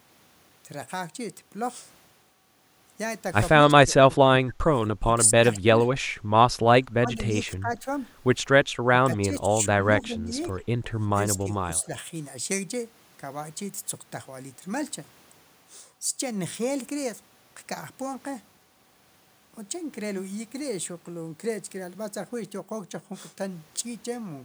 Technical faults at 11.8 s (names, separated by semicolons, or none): speech suppressed in double talk; echo leak